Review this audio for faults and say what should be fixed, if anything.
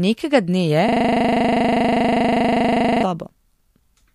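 A system hang loop runs from 0.88 to 3.03 s: one 40 ms piece of speech repeats about 54 times, giving a 25 Hz rattle while the driver stalls. Prevent it by having the audio driver mute or clear the ring buffer when the host stops refilling it.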